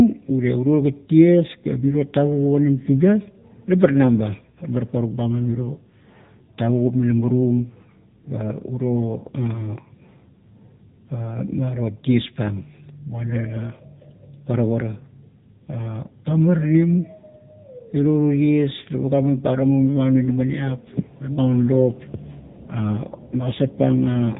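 From start to finish the speech carries AMR narrowband mobile codec damage. Nothing above about 3.8 kHz survives, and the voice has the buzzy, synthetic edge of a vocal-tract model rebuilt from a few pulses per frame, which fits a low AMR-NB mode near 8 kbps. A plain low-pass filter would only dull the sound. Here the texture itself is artificial, with a plainly audible codec roughness that filtering alone would not produce.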